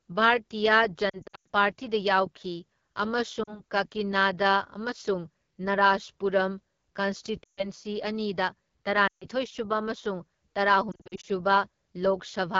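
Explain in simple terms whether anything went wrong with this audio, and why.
Yes, two things went wrong. The whole recording went through the AMR wideband (HD Voice) codec at a low setting, so the speech sounds rough and raspy throughout. Lost AMR speech frames also cause brief dips, warbles and fades at 1.09 to 1.47 s, 3.43 to 3.62 s, 7.43 to 7.68 s, 9.07 to 9.25 s and 10.91 to 11.26 s. Bits of the signal were garbled by radio errors on the way, so the decoder briefly filled those gaps by guessing from the last good sound.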